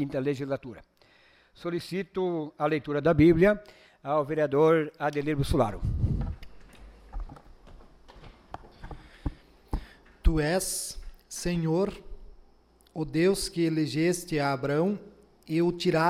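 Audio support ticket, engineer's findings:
No faults found on listening; nothing to escalate from this audio.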